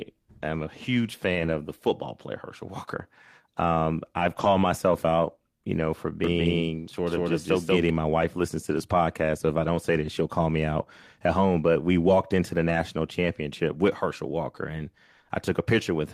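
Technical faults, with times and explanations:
1.35–1.53 s, 4.19–4.45 s, 8.21–8.23 s, 9.75–9.77 s, 12.67–12.77 s: lost packet rebuilt from error correction. The sound never drops out, but between "am a huge" and "the football player", before "myself out you know", and between "we walked into the" and "championship with" it turns briefly rougher and noisier. A low-bitrate backup copy carried in the following packet stands in for the missing audio. Unlike concealment, the gaps hold real, coarser content rather than guessed filler.
6.24–7.90 s: doubled audio track. A second, equally loud copy of the sound follows roughly 200 ms behind and starts and stops abruptly, likely from a second, slower capture path mixing in. It lacks the decay and room colouring of a true echo or reverb.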